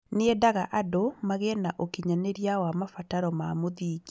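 No technical faults can be heard in this speech.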